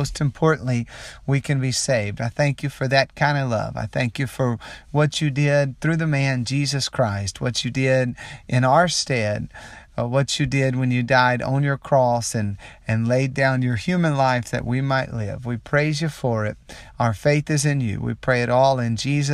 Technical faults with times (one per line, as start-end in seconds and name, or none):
none